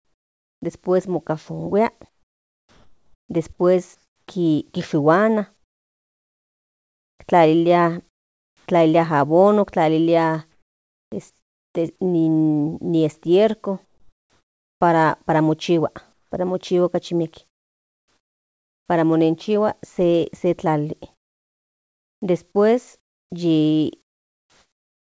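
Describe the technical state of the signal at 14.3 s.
At 14.3 s the sender has likely stopped transmitting, so comfort noise in place of the background fills 13.85 to 14.81 s: a steady, featureless hiss about 7 dB quieter.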